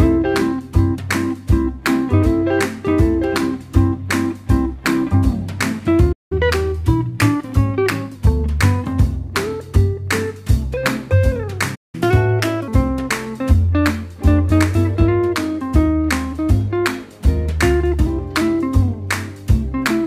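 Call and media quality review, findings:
Playback stall, 6.12 s and 11.75 s: sound cuts out mid-flow for about 0.18 s each time, then resumes. Likely the player buffer running dry or its playback thread blocked, so the output goes silent until data flows again.

Catch-up at higher speed, 6.32 to 8.15 s: audible speed-up at 1.1x with pitch raised roughly one and a half semitones. Resampler draining the backlog from the first stall. Second instance, 11.95 to 12.68 s: harsher, 1.25x, pitch up about four semitones, shorter burst. Catch-up rate inconsistent between events.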